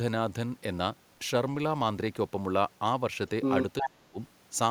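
Speech, with two closely linked faults near the end. From 3.78 to 3.90 s there is an echo leak: a distinct copy of the speech returns about 366 ms late and roughly as loud as the direct voice, likely because the far end's echo canceller let its loudspeaker pickup pass back down the line. What separates this from room reverberation is that the repeat is a discrete, delayed copy rather than a smooth decaying tail. Almost immediately, from 3.82 to 4.20 s, the talker is hit by speech suppressed in double talk. The level dips deeply, at worst by around 30 dB, across roughly 0.4 s while the two signals overlap. The likely cause is the canceller misreading simultaneous talk as echo and attenuating everything. Unlike a network dropout, the loss is a gain duck tied to the overlap, not abrupt clean gaps scattered at random.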